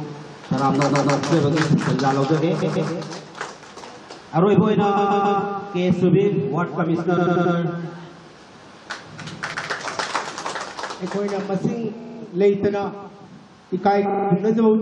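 Repeated frames stutter at 0.89, 2.61, 4.96, 7.16, 9.53, 11.99 and 14.08 s: blocks of 46 to 139 ms replay one to four times.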